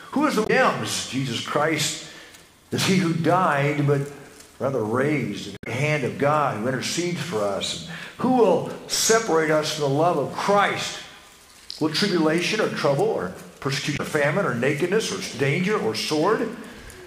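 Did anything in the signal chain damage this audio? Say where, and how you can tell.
Yes. Damaged data in the compressed stream, a codec-stage fault. Brief disruptions at 0.43–0.50, 5.55–5.67 and 13.93–14.00 s. Corrupt frames forced the decoder to resync.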